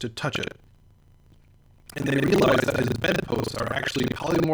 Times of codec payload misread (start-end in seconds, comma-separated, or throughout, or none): none